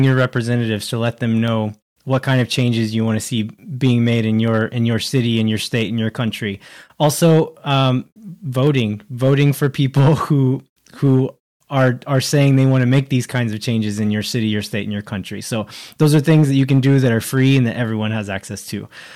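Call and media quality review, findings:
Hard clipping, whole clip: speech peaks squared off, crackly fuzz on loud syllables. Gain stage overdriven by about 6 dB, so roughly one percent of samples hit the ceiling. Probably input gain or a fixed-point stage before the encoder.

Clock drift buffer slips, 0.28 to 18.86 s: steady tick every 0.6 s, around thirty in total. Likely two devices on separate clocks, a few hundred ppm apart, so the buffer drops or repeats a handful of samples each time.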